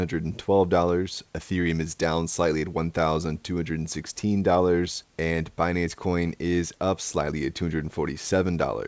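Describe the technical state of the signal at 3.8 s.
At 3.8 s the speech is intact, carried cleanly through the call path with nothing heard above 8 kHz, as expected for a G.722 connection.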